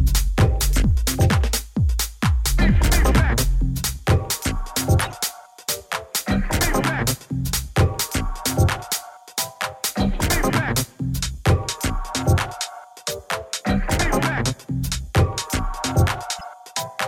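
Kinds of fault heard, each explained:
Corrupt frame decoded: sharp chirps and noise bursts at 0.61–0.63 s, 5.00–5.12 s and 16.39–16.43 s, the first two loud, the last faint. Compressed frames with flipped bits were decoded anyway, so misread codes and gains spread energy wrongly.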